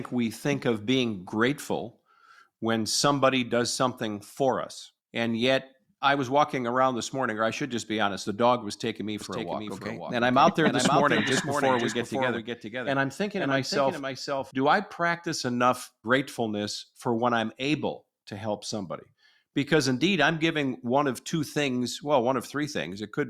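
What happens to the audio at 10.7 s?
At 10.7 s the speech sits inside a doubled audio track running from 9.21 to 14.51 s. A second capture path or an out-of-step edit has likely mixed in another copy, about half a second late and roughly 5 dB quieter. The result is a dry, full-band repeat trailing each syllable, starting and stopping abruptly at the span's edges.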